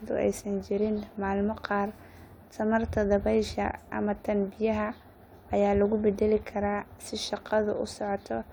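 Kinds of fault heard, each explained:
No faults heard anywhere in the clip, so there is nothing to list.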